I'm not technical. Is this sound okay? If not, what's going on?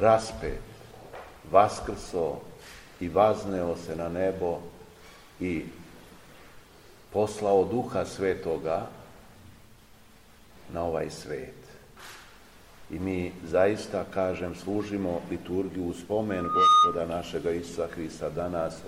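No. Near the end there is loudspeaker feedback squeal. A microphone was picking up the very loudspeaker it was feeding, so the sound went round and round that loop, growing each time at one pitch. From 16.29 to 17.05 seconds a steady whistle at about 1.2 kHz swells up over a fraction of a second until it is clearly louder than everything else, then cuts off.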